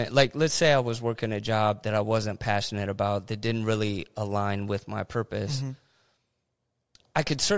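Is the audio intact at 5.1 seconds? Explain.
Yes, the audio is intact at 5.1 seconds, with no fault at that moment.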